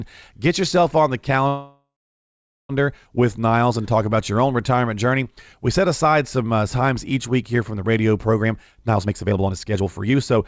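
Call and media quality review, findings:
Call audio freeze, 1.48–2.71 s, right after "yourself on the": the last sound is stretched into a fading buzz or hiss, then about 0.78 s of silence. Likely a jitter buffer underrun from held-up packets. Playback resumes where it stopped, nothing lost, adding about 1.2 s of delay.

Jitter buffer speed-up, 8.43–10.44 s, after "here from the radio": speech runs hurried at 134% speed with pitch unchanged. The buffer drains excess backlog by cutting pitch-period-length pieces repeatedly, removing roughly 0.7 s.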